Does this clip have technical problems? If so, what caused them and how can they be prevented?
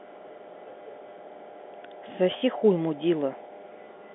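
Yes. Between 2.38 and 2.42 s there is packet loss with the last packet repeated. About 40 ms of audio went missing, and the receiver filled the gap by replaying the most recent packet, which fits two 20 ms packets. The repeats ignore the pitch cycle, and the passage has a brief robotic stutter. A waveform shows the same short segment three times in a row. Proper packet loss concealment or forward error correction on the link would prevent it.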